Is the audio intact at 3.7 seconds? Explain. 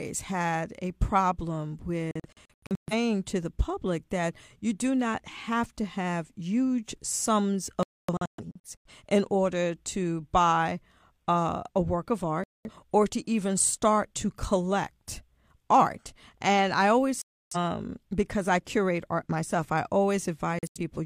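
Yes, at 3.7 seconds the audio is intact, with no dropout, click, distortion or other fault audible at that moment.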